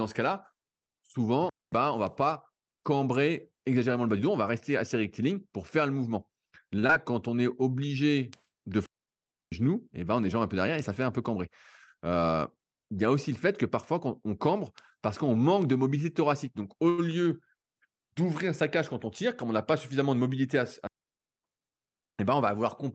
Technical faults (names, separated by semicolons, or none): digital wireless dropout; short stall from a late packet; short concealed packet loss; jitter buffer speed-up